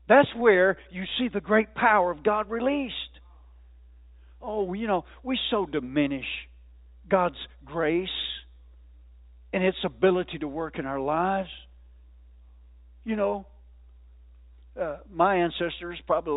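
No technical faults can be heard in this speech clip. It carries the narrow band of G.711 telephone coding, with nothing above 4 kHz and at most a faint noise riding on the signal level, which fits the 64 kbps mu-law format.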